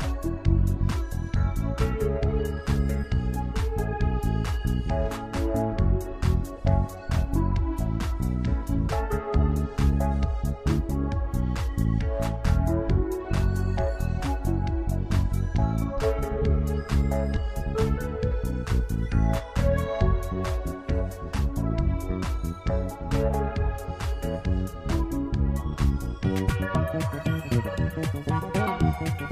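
At 26.25 s the sound abruptly speeds up and stays that way to the end at 29.31 s. This is a section at the wrong speed. It runs at 1.73 times its proper rate. Pitch rises with tempo, by about ten semitones, so everything turns high, thin and hurried. The likely cause is an editor or player reading this stretch against the wrong clock. Timing and pitch shift together, at one fixed ratio, for the whole section.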